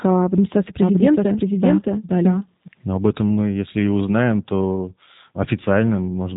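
From the very start, and all the way through, the speech has that G.729 codec sound. Nothing gets past about 3.8 kHz, so the top end is simply gone, and the voice comes across a bit rough and synthetic. That's the codec rebuilding each short frame from a vocal tract filter, a pitch guess and a handful of pulses rather than the real waveform. The damage is plainly audible and fits the 8 kbit/s VoIP flavour of it.

Then from 0.82 s to 2.68 s there's a doubled audio track: a second copy of the speech trailing the first by something like 0.7 s, at pretty much the same loudness. It isn't a room echo. There's no decay or reverb colour, just a clean duplicate, and it switches on and off abruptly at those edges. Most likely the same signal got picked up twice, once through a slower path.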